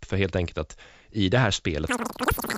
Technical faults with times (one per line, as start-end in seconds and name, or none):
1.88-2.58 wrong sample rate